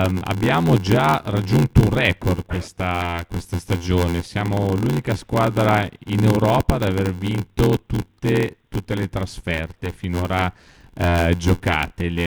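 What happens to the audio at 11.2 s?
At 11.2 s the speech is inside a block size mismatch (padded) that runs through the whole clip. Each block the next stage reads, which fits a 512-sample size, arrives short and is zero-filled. That causes an 86.1 Hz buzz and slows playback to 0.861× at about normal pitch.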